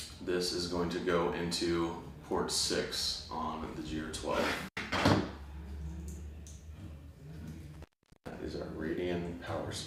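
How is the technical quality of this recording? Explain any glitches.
The recording has two dropouts where the signal briefly disappears. The first runs from 4.67 to 4.77 s, a gap of about 84 ms. The second, from 7.74 to 8.35 s, is much longer at about 422 ms. Each starts and ends with a scratchy crackle, and faint hiss remains in between. This is intermittent contact: a loose cable or plug momentarily loses its connection, the break and remake of contact produce the crackles, and the audio path stays open until the conductor touches again.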